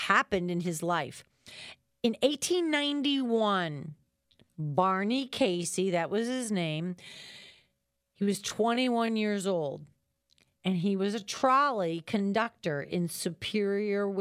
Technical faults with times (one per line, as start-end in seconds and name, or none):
2.84-14.21 time-stretched section